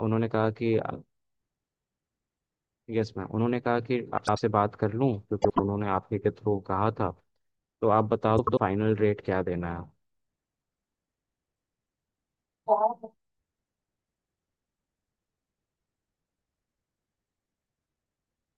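At 4.18 to 4.40 s, 5.42 to 5.60 s and 8.37 to 8.60 s, frames out of order garble the speech. Two neighbouring blocks, 96 ms each (72 ms at 5.42 s), play swapped. Each stretch flutters. No time is lost.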